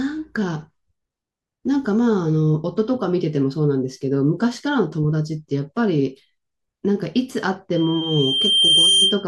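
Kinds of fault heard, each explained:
Loudspeaker feedback squeal: the microphone is hearing the loudspeaker it drives, and around 3.2 kHz the loop gain passes unity, so that single frequency keeps regenerating itself. From 7.75 s a pure tone at 3.2 kHz emerges and swells over roughly a second into a piercing squeal, ending up a few decibels louder than the speech, and it keeps sounding until 9.25 s, just before the audio ends.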